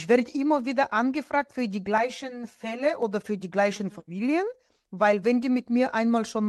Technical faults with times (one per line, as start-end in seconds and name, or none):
1.98-3.02 channel delay (comb filtering)